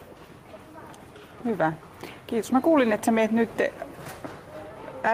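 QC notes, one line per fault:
Throughout, gain pumping: a gain swing of around 5 dB, leaving loud and soft passages squashed together. This likely comes from input gain set far too high, with a fast limiter pulling it down.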